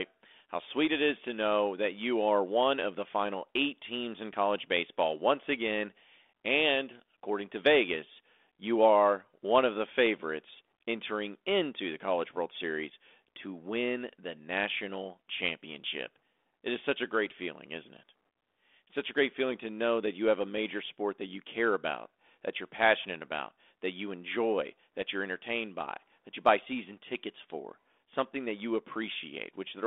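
Nothing goes wrong anywhere in this speech recording; it simply comes over a 32 kbit/s G.726 link, with the telephone band running from about 250 Hz to 3.5 kHz.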